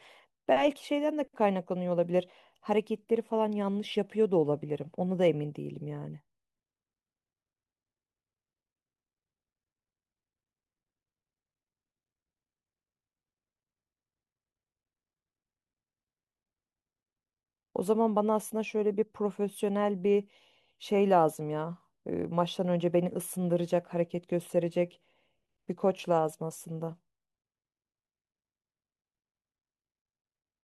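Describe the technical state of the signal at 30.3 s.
At 30.3 s the speech signal is intact, with no audible fault at that moment.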